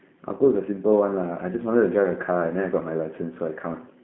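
From start to finish the speech runs through G.729 codec damage, and it's plainly audible. The line band sits at roughly 150 Hz to 3.4 kHz with nothing above 3.6 kHz, and the rebuilt-from-pulses roughness fits an 8 kbit/s G.729A stream, so it's intelligible but slightly synthetic.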